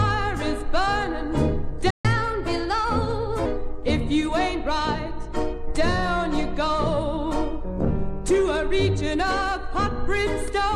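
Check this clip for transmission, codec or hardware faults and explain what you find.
Two playback faults sit back to back early in the clip: a brief dropout followed by a stretch that runs fast and sharp.

Playback stall, 1.90 to 2.05 s. The sound cuts out mid-flow and the output falls silent for about 140 ms before resuming. The likely cause is that the player's buffer ran dry or its output thread was held up, so nothing reached the device until it recovered. The gap is short but clearly audible as a hole in otherwise continuous audio.

Catch-up at higher speed, 2.05 to 3.46 s. Right after the gap, the player works through its backlog by resampling at 1.1 times normal speed to recover the lost time. Because speed and pitch are tied together in this kind of resampling, everything sounds both hurried and raised by roughly one and a half semitones. It lasts about 1.4 s, then settles back to normal pace and pitch.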